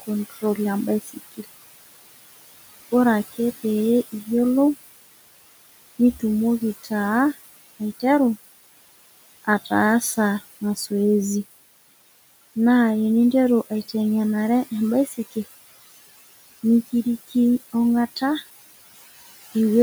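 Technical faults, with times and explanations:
Throughout, noise suppressor artifacts: room noise is pulled down by about 17 dB between phrases and returns underneath them, so the background pumps; a spectrogram shows the noise floor gating in and out.
0.30–0.58 s, 1.02–1.45 s and 15.07–15.37 s, speech cut by the noise suppressor: quiet parts of the speech were treated as noise and lowered by up to about 21 dB, so they sound swallowed. On the waveform they appear as brief dips of roughly 100–200 ms, and on the spectrogram as faded patches.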